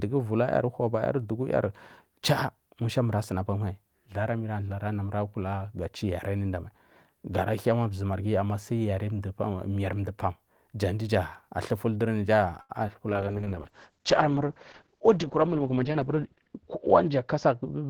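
At 12.61 s the speech stalls until 12.71 s. This is a short stall from a late packet. The jitter buffer ran dry, so the receiver held the last sound for 78 ms. Nothing is lost, but the delay grows by 78 ms. The held sound has a faint buzz or dip.

From 12.87 to 12.90 s comes a short concealed packet loss. About 20 ms of audio never arrived. The receiver papered over the gap by extending the previous sound. It then blended back into the real audio. It is heard as a brief smear or wobble.

From 13.11 s to the end there is a call bitrate drop. The encoder falls from 32 kbps to 8 kbps. It sits at its lowest for nearly 3 s. The coded bandwidth shrinks from 20 kHz to 8 kHz. The speech turns muffled, coarse and watery.

Between 15.36 and 16.18 s a jitter buffer speed-up occurs. Too much audio had queued up, so the receiver trimmed short pitch-period slices, around 70 ms in total. Playback runs at 109% speed. 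The pitch stays the same, but the speech sounds hurried.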